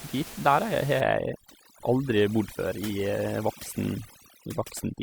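From 1.01 s to the end, overdone noise removal: a noise reduction stage set too hard shuts off frequency bands near its noise estimate, taking quiet parts of the speech with them. Room noise about 15 dB down drops and breaks up into twinkling specks.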